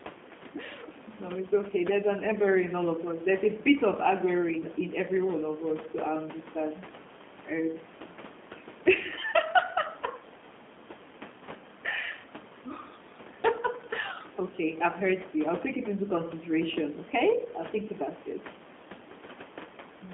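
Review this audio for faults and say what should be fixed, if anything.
G.729 codec damage runs through the whole recording. The speech has been squeezed through a low-rate coder that rebuilds it from a vocal tract filter, a pitch predictor and a few pulses per 10 ms frame, which fits 8 kbit/s G.729A. The result sounds plainly rough and synthetic, and the room noise, about 19 dB below the speech, warbles along with it. On a spectrogram, energy sits only between 200 Hz and 3.5 kHz, with a hard ceiling and nothing above. Harmonics look smeared and slightly blocky frame to frame. To prevent this, record or transmit over a wideband path, such as a wideband codec at a higher bitrate, rather than a G.729 telephone leg.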